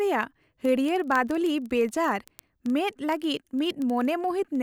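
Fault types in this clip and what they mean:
Word clock ticks: A steady run of sharp ticks of uneven strength sits under the speech from about 0.11 s to 4.59 s, roughly one every 40 ms, around a hundred in all. The receiving device runs on its own clock instead of locking to the sender's, and the two drift apart by something like 500 parts per million. Each time they slip past each other, one sample is dropped or repeated, leaving a click.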